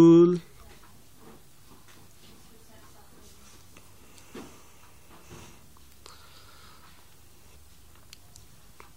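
There are no technical faults to describe in time order in this audio.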